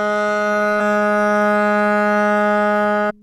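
At about 0.79 s, and again from 3.09 to 3.11 s, the audio breaks into a brief glitch caused by damaged data in the compressed stream. Corrupted bytes made the decoder misread those frames, lose sync and hunt for the next valid frame header.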